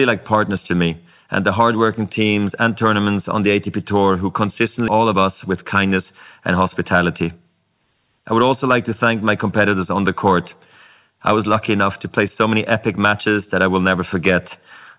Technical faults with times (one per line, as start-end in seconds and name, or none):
4.88-4.90 skip ahead
4.98-6.04 jitter buffer speed-up